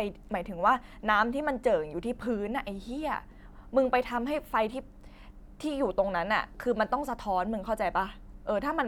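No technical fault can be heard anywhere in the speech. There is no moment in the recording that calls for a time or a measured value.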